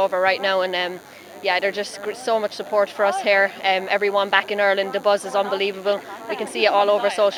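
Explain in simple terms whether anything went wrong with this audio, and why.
A nearby DECT cordless phone or its base station sends radio bursts 100 times a second, and the audio circuit picks them up. The result is a faint, thin, steady buzz under the whole recording.

At 2.21 s, dropped samples, likely a tiny fraction of a millisecond lost from the stream, make the waveform jump suddenly, producing one sharp click.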